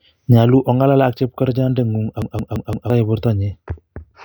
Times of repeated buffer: 2.22-2.90

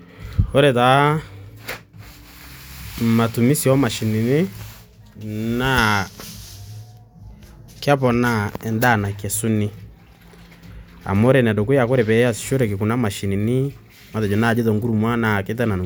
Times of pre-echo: none

